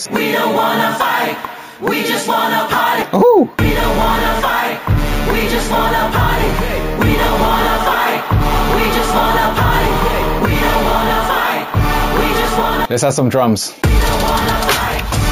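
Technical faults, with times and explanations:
Throughout, imaging from sample-and-hold upsampling. A bright, metallic fizz sits above the sound and rises and falls with its level. The fizz points to a low-rate original, likely near 16 kHz, raised to a higher rate by simply repeating samples with no smoothing filter. That leaves mirror copies of the spectrum. The lowest copy spans 8 kHz to 16 kHz, about 18 dB below the signal. Its pitch movement runs opposite to the sound's own.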